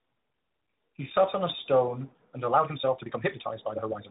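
Throughout, the call shows tandem speech coding: it appears to have been decoded and re-encoded across links with different codecs, likely an AMR-NB leg followed by G.726 ADPCM, each coder compounding the last one's errors. The speech sounds rough, muffled and warbly.

From 2.49 s to the end, a time-stretched section appears, likely from software compressing that stretch to fit a length by dropping short pieces while holding pitch. The pace abruptly jumps to about 1.84 times normal, sounding rushed at unchanged pitch.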